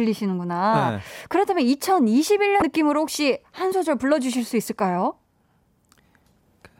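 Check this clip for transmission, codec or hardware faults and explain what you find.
One fault turns up, in the stream itself. From 2.59 to 2.62 s there is damaged data in the compressed stream: corrupted bytes make the decoder misread the frames there and lose sync until it finds the next frame header. The speech gives way to a brief chirp, squawk, click or short hole lasting about 30 ms.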